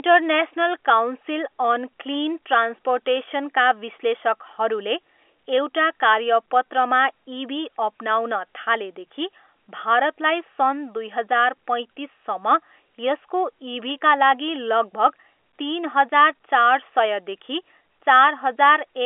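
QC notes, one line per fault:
No faults found; the speech sits in an ordinary G.711 A-law telephone channel, band-limited to 300 Hz to 3.4 kHz with nothing above 3.7 kHz, as expected of that format.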